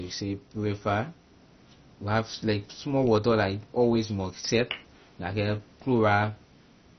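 Throughout the speech, nothing reaches above 6.1 kHz. The sound is dull, with a gurgling, granular edge as upper bands flicker in and out. This is likely heavy MP2 compression, starving its sub-bands of bits, which fits roughly 32 kbps.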